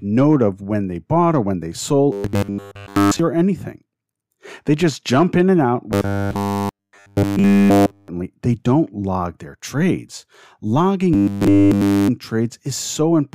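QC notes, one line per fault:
2.12–3.19 s, 5.92–8.08 s and 11.13–12.09 s: robotic sound from repeated short buffers. Between "or when they sold" and "or anything", between "jump in and out" and "they don't log their", and again near the end, the speech becomes a rigid, metallic buzz pinned at 100 Hz. That pitch points to a 10 ms chunk being replayed over and over while new audio is skipped, likely because input arrived too seldom. What sets it apart from stutter or dropouts is that the buzz is steady and evenly pitched, with no gaps.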